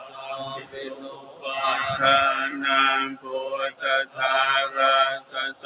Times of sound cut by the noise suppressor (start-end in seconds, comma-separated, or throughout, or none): 0.00-1.47, 3.16-3.33, 5.19-5.65